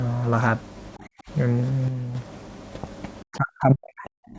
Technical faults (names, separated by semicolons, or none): background gated by the echo canceller; one channel drops out; speech suppressed in double talk